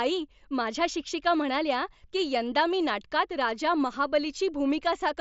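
No faults found in this speech; the only thing to hear is the Bluetooth mSBC headset path working as designed, with nothing above about 7.7 kHz and a light graininess consistent with its 61 kbps coding.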